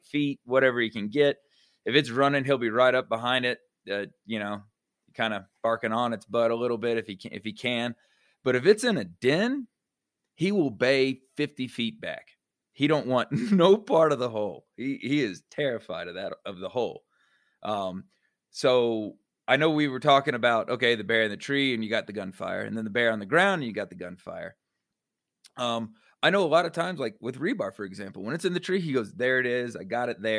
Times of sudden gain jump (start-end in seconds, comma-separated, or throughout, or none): none